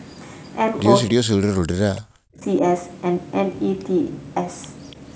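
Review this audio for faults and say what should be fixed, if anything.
Between 1.09 and 2.44 s the speech dips, with the deepest drop reaching about 40 dB and roughly a second of that span attenuated or cut out in pieces. This is likely speech suppressed in double talk: with both ends talking at once, the echo canceller could not tell the near-end talker apart from the loudspeaker echo and turned everything down. To prevent it, use a canceller with proper double-talk detection and less aggressive residual suppression so near-end speech is kept while the far end talks.

From 4.90 to 4.96 s a short scrap of a delayed copy of the voice comes through, about 285 ms behind the original and around 30 dB below the speech. The likely cause is an echo leak: the far end plays the call on a loudspeaker, its canceller failed to remove all of what its microphone picked up, and the remainder was sent back. 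The return is brief and quiet. To prevent it, improve that endpoint's echo cancellation convergence and tail length, or have that side use a headset instead of a loudspeaker.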